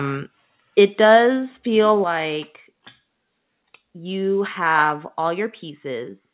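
A microphone volume step-down at 2.04 s: the speech and the background beneath it both drop by about 5 dB at once and stay at the lower level. The cause is likely the call software judging the microphone input too hot and lowering the device's input volume in a single step, rather than a change at the source. The audio sits in a narrow call band, which has nothing above 4 kHz, consistent with a G.711 A-law link at 64 kbps.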